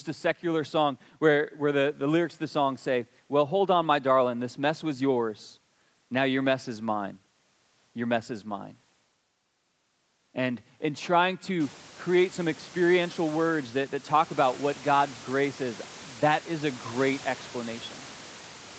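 Speech with nothing above 8 kHz, consistent with a wideband call path and its microphone processing, and room noise that steps up by about 23 dB a little after 11 s yet stays about 22 dB below the voice, with nothing technically wrong to report.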